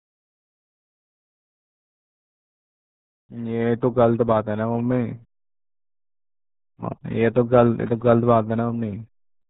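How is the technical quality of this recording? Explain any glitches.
Poor. One fault runs through the whole clip.

RealAudio 14.4 codec damage is present from start to finish. This low-rate speech coder was built for dial-up modems. It discards everything above 4 kHz. Heavy coding smears the rest. The speech sounds muffled and gargly. That fits roughly 8 kbit/s.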